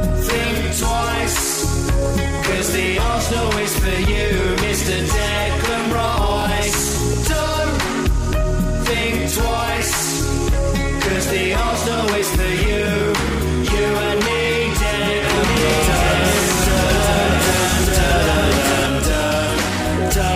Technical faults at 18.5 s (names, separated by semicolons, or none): doubled audio track; overlapping chunks